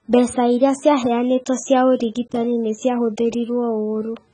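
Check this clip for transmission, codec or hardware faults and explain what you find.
The speech carries one fault for its whole length: AAC compression. Nothing is present above 9.6 kHz, and the damage is heavy. The likely cause is an AAC-LC encoder run at a very low bitrate, with the heavy damage pointing to around 16 kbps. Starved of bits, the encoder lowers its cut-off and quantises the remaining frequency lines coarsely, leaving gaps. The result is dull, smeared speech with a warbling, fizzy texture on sibilants and sustained sounds.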